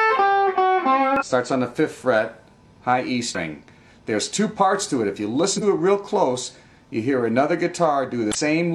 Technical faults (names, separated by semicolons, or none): compressed frames skipped